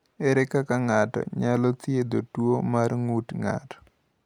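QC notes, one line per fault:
Nothing stood out on listening to this speech clip.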